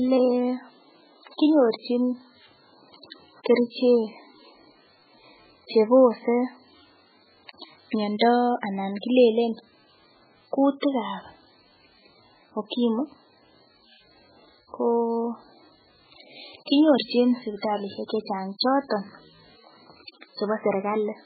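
From start to finish the speech carries heavy MP3 compression artefacts, and the likely cause is a very starved encode, the kind you'd get at something like 8 kbps. Everything above 4.5 kHz is simply gone, so the s sounds lose their bite and the whole thing sounds dull and boxed-in. Underneath that, weak frequency lines keep flickering in and out between frames, giving a watery, swirly texture with little metallic chirps, and consonant attacks come out smeared rather than crisp.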